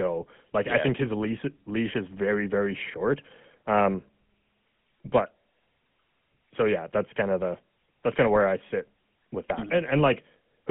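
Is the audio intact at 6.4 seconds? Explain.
No. At 6.4 s the speech is passing through the GSM full-rate codec, which affects the whole clip. The codec fits the voice to a vocal-tract filter excited by a sparse, regular pulse train, and the sound suggests a 13 kbps stream. The result is a clearly audible buzzy, gravelly roughness. A spectrogram shows energy confined to roughly 150 Hz to 3.4 kHz with nothing above, and smeared, grainy harmonics.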